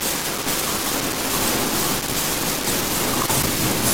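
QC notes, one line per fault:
No faults heard in this clip.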